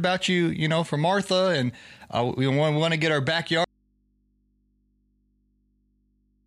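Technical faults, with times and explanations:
3.64 s to the end, audio dropout to a faint residue: after "want to get our" the speech cuts off instantly, leaving only mains hum roughly 45 dB down, likely from a live but open input. A pause or fade would neither stop so abruptly nor expose hum.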